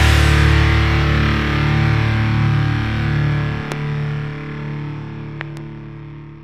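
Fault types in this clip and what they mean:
Loud pop: a sharp pop at 3.72 s, then a double pop from 5.41 to 5.59 s, well above the sound. Likely a voltage glitch.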